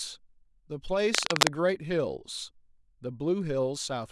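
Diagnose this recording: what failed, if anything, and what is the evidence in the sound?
Cable scratch noise, at the analogue wiring stage: from 1.14 to 1.56 s a dense, irregular scratching rides over the speech, somewhat louder than it. The likely cause is a worn cable or connector being moved, so its contact resistance jumps around and injects uneven noise bursts.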